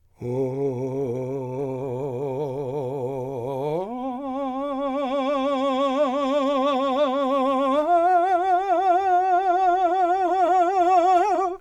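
Nothing in this music stood out as a technical problem on listening.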